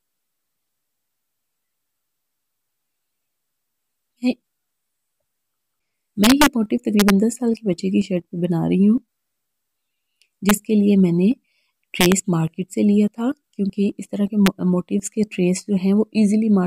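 Integer overflow: loud peaks exceeded the largest integer and wrapped to the opposite sign instead of being limited, at 6.24–6.46 s, 7.00–7.10 s, 10.49 s, 12.01–12.12 s and 14.46 s. Driven about 0 to 3 dB past the limit, the sound snaps across its full range in violent cracks, far harsher than clipping.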